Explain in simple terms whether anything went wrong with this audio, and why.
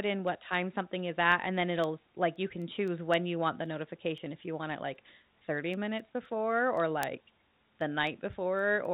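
Word clock ticks run through the speech from 0.28 to 8.85 s, about every third of a second. Two devices' clocks disagree slightly, so a sample gets dropped or doubled.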